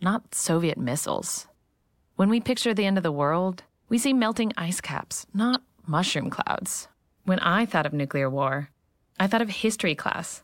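Corrupt frame decoded at 1.28 to 1.33 s and again at 5.53 to 5.56 s: flipped bits in a couple of compressed frames were played anyway, throwing energy to wrong frequencies. Each time the speech is broken by a short chirp, squeak or burst of noise, the second one louder.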